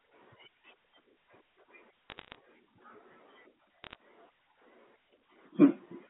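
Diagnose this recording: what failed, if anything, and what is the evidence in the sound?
The fault is on the transmission line: bit errors on a digital phone line corrupted the G.711 stream, which otherwise carries the sound in the usual band of about 250 Hz to 3.5 kHz. Two bursts of sharp ticks and crackle sit over the unchanged speech, from 2.10 to 2.35 s and from 3.84 to 3.95 s. A few bits in every thousand were flipped. Each flipped bit rewrites one logarithmically coded sample, and hits on the sign or upper bits throw it far off and produce a click.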